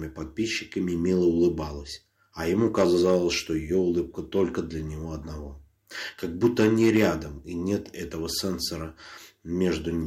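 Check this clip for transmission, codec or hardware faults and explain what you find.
Two bursts of hard clipping, from 2.59 to 3.17 s and from 6.44 to 7.07 s. In each, the signal reached a stage that could not pass its full level, overdriven by about 6 dB, so the waveform peaks were sliced off flat at the ceiling. Those squared-off tops generate harmonics high in the spectrum, and the sound takes on a crackling edge on the peaks for about half a second each time.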